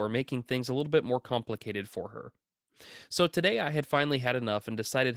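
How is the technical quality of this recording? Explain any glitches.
The speech has plainly audible coding damage from start to finish, heard as Opus voice compression. Throughout the clip, the low-rate coding makes the speech sound hoarse and slightly robotic. The sound fits hybrid operation at roughly 16 kbps, with a linear-prediction coder below 8 kHz and a coarse transform layer above. A spectrogram would show blurred harmonics and blocky, patchy energy above 8 kHz, changing in steps about 20 ms apart.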